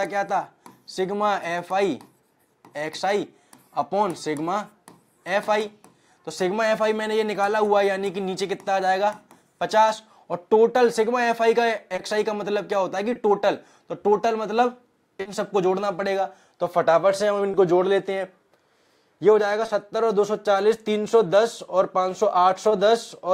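Short concealed packet loss occurs six times in the second half: at 11.95, 13.13, 15.21, 17.51, 19.65 and 22.69 s. Each time about 20 ms of audio, 40 ms at 15.21 s, failed to arrive in time, and the receiver filled the hole by extending the preceding sound before blending back. Each is a brief smear or wobble rather than silence, which separates it from an unconcealed dropout.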